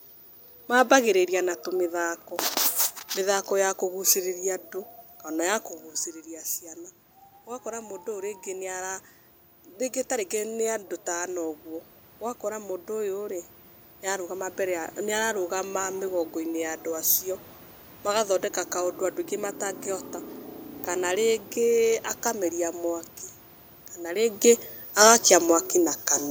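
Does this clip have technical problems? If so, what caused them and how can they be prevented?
Yes. Automatic gain rising from 7.62 to 15.79 s: after the input fell by about 11 dB, the gain control slowly added about 10 dB, so the speech and the room noise swell together over eight seconds. To prevent this, set a fixed microphone gain or use a slower, limited-range AGC, and keep the talker at a steady distance.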